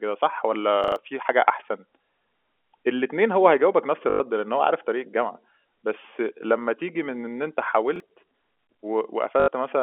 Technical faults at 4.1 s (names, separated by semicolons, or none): packet loss with last packet repeated